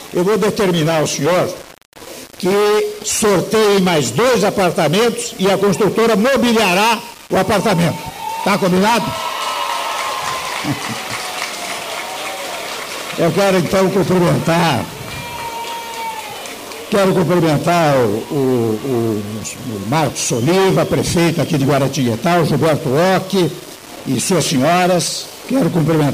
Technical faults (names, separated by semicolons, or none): low bit depth without dither